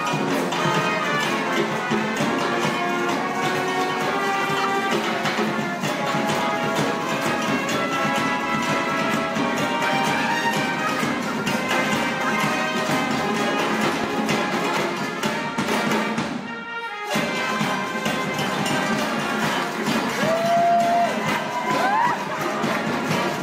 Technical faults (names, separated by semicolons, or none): loud pop